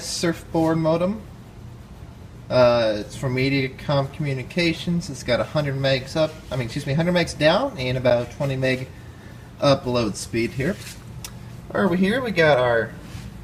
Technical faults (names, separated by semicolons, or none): gap between stream segments